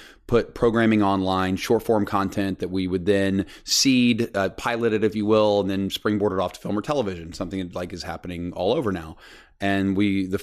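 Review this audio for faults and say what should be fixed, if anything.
Nothing stood out on listening to the speech, so there is nothing here that needs fixing.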